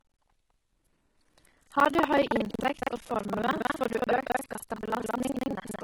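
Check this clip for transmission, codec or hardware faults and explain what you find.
Two faults run through the whole speech clip: heavy codec damage and buffer tearing.

The treble is synthetic and gritty. That's likely HE-AAC compression at a low bitrate, around 16 kbps, rebuilding the top from copied lower bands.

Buffer tearing adds a steady robotic buzz at 21.5 Hz, which fits a 2048-sample buffer. The writer and reader have crossed, so roughly a third of each buffer replays audio about a fifth of a second old.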